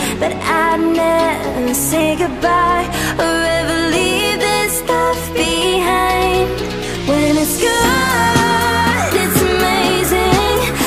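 From 2.01 to 3.18 s and again from 6.92 to 8.94 s, the sound slows by about 5.7% and drops roughly a semitone (about 101 cents) before snapping back. These are drift correction steps, likely a clock-matching resampler abruptly lowering the playback rate to rebalance its buffer.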